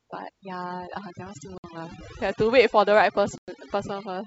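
Throughout, overdone noise removal cuts frequency bands sitting near the noise floor, so the background drops and breaks up into twinkling specks.

At 1.58 s and again at 3.38 s, packet loss on the ADPCM call drops a few packets (about 60 ms), then several (about 100 ms). The gaps are filled with silence, and because the decoder's predictor and step size fall out of step, speech resumes after each hard-edged hole with brief distortion.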